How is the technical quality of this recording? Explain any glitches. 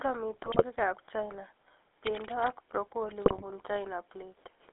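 The quality is poor: the speech is narrowband and codec-damaged throughout, with two bursts of decoder corruption and one scratchy disturbance.

Throughout, a GSM full-rate codec, consistent with 13 kbps, limits the line to 300 Hz–3.6 kHz. The coarse pulse excitation adds a constant buzzy roughness that is steady rather than intermittent.

From 0.34 to 0.64 s and from 3.26 to 3.42 s, GSM bit errors corrupt the decoder's filter, pitch and gain parameters, so the speech itself breaks into squawks and gargling.

From 2.04 to 2.51 s, dense uneven rustling sits nearly as loud as the speech, likely cable scratch noise from a worn contact. It is added noise layered over the speech, unlike the distorted speech of bit errors.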